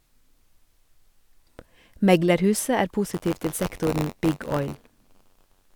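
A speech recording that, from 3.13 s to the end, carries buffer tearing: a steady robotic rattle at about 94 Hz, which fits a 512-sample buffer. The writer and reader of the ring buffer have drifted so that they cross each period, leaving roughly a twentieth of every buffer filled with audio about 20 ms old, spliced in with hard edges. Unlike mains hum, the buzz follows the signal and vanishes in pauses, and unlike an underrun it never drops to silence.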